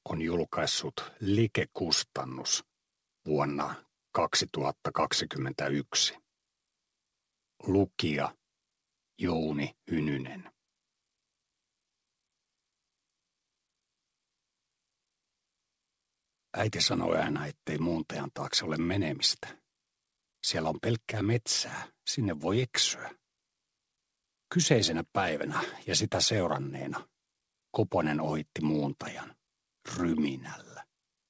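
No faults; a trace of the call path is a band limit with nothing above 8 kHz, which fits a wideband codec such as G.722 at about 64 kbps.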